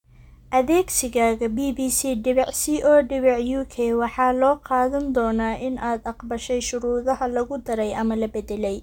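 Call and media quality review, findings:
No faults found in this speech recording. No defects to log against any component.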